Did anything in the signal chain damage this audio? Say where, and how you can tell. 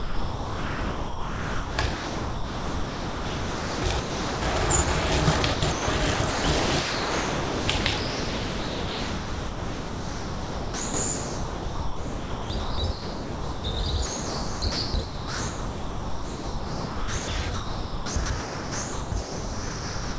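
Yes. It's sound chopped by the voice detector, at the call-processing stage, almost through the whole clip: 0–4.42 s, 5.42–5.88 s, 6.14–13.64 s, 14.06–17.28 s and 17.54 s to the end. Real sound keeps flickering into smooth synthetic hiss, likely the sender's VAD gating and the receiver filling gaps with comfort noise, over roughly 16 s in total.

There's also one quick patch of sound dropped by the voice detector, 4.84–4.88 s. A 40 ms slice gives way to steady noise and then snaps back. That's likely the detector briefly mistaking the material for background and stopping transmission. The G.722 path's band ends around 8 kHz.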